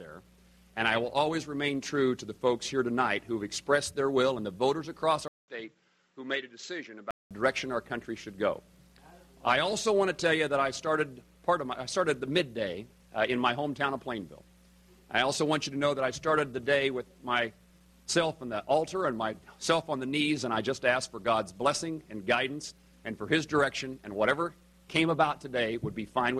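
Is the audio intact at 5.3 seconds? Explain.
No. From 5.28 to 7.31 s, a 200 ms gap leads into duller, quieter sound with nothing above 7.7 kHz, likely an input switched to a poorer device.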